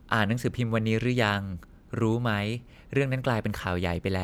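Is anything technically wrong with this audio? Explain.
No, no technical faults heard.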